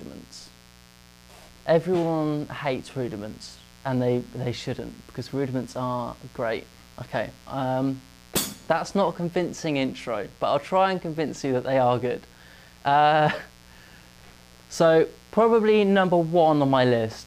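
Mains buzz runs from start to finish of the audio, a steady, raspy hum sitting roughly 30 dB below the wanted sound. It comes from a 60 Hz supply: something in the signal path lets sharp switching spikes leak in twice per mains cycle, so pulses arrive 120 times a second. Because those spikes are so abrupt, their harmonics stack up well past the fundamental into several kHz, giving the buzz its gritty edge rather than a pure low tone.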